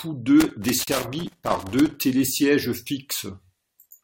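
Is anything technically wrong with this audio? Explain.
Yes, there are two faults in this speech.

Loose connector crackle, from 0.40 to 1.96 s: a worn or dirty contact keeps making and breaking the circuit as it shifts, chopping the signal, and any DC on the line adds pops. It comes through as an irregular burst of scratchy crackle laid over the speech.

Gap at a join of encoded pieces, at 0.84 to 0.87 s: separately encoded sections were joined without trimming the encoder's start-up delay and end padding. This leaves a 37 ms gap with smeared edges, after which the speech resumes where it stopped.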